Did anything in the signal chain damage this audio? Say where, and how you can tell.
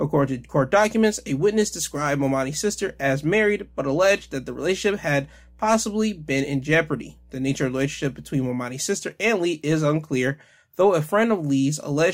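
Yes. Mains hum enters at the analogue wiring stage. A steady low tone at 60 Hz sits under the speech from the start of the clip to 8.50 s, roughly 30 dB below the programme level, then stops cleanly. Its fixed pitch and constant level, unrelated to what is being said, mark it as power-line interference. A ground loop or a transformer close to the cabling would couple the 60 Hz supply into the signal path before conversion.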